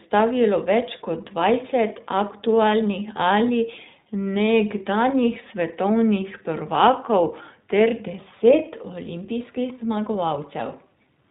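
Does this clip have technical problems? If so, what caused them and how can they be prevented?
Yes. The iLBC codec affects the whole clip. Nothing above 4 kHz survives, so the speech sounds narrowband and muffled, with a plainly audible rough, slightly synthetic edge. iLBC codes the excitation of each short frame on its own rather than predicting from the previous one. That independence helps against packet loss but costs smoothness, and the texture here fits its 15.2 kbps mode with 20 ms frames. To prevent it, record or transmit with a wideband codec such as Opus at a higher bitrate.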